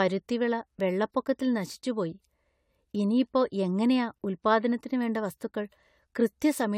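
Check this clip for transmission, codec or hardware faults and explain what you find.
There's one fault running through the whole speech clip: generation loss. It sounds swirly, hollow and smeared, with soft attacks and nothing above 18.7 kHz. That points to about five passes through something like AAC-LC at 96 kbit/s, each likely piling new artefacts onto the last.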